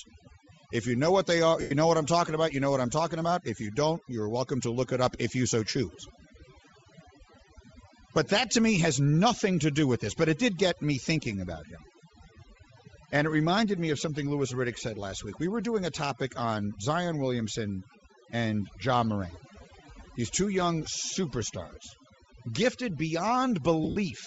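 Overdone noise removal runs throughout. Gaps between phrases drop and break up into twinkling specks, and quiet parts of the speech go with them.

The speech also carries a plainly audible breathy, grainy edge throughout. The upper spectrum sounds noise-filled, likely from Bluetooth LC3 compression with short frames at a low rate, which fits 32 kbps.

Lost LE Audio frames appear from 1.61 to 1.72 s, between "know what they are" and "know what I'm talking". For about 98 ms the decoder repeats the last spectrum, so the speech becomes a noisy smear. From 23.84 to 23.96 s, scattered losses do the same, with the longest run about 70 ms.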